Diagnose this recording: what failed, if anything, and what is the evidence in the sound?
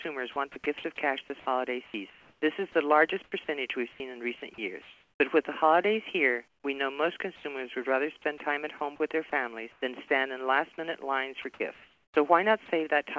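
Call processing stage, sound chopped by the voice detector: at 0.02–0.84 s, 1.40–5.20 s, 8.22–10.10 s and 11.42–12.68 s the sound switches repeatedly to comfort noise, about 180 ms, 1.14 s, 240 ms and 520 ms in total. The likely cause is a voice detector toggling transmission. On a spectrogram, fine structure breaks into smooth, featureless patches, all capped at 8 kHz by the G.722 call path.

Call processing stage, comfort noise in place of the background: from 6.48 to 6.64 s the real background, sitting about 45 dB below the loud parts, becomes a uniform hiss about 8 dB quieter. This is likely discontinuous transmission, with the receiver synthesising the noise. On a spectrogram it is a flat smear with a visible level dip. The waveform shows a lower, even noise floor.

Call processing stage, sound dropped by the voice detector: from 7.36 to 7.44 s, 80 ms of sound is lost and steady noise plays in its place until transmission resumes. 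The likely cause is the detector mistaking quiet sound for background. On a spectrogram there is a short gap filled with smooth noise. The waveform shows an envelope drop with abrupt edges.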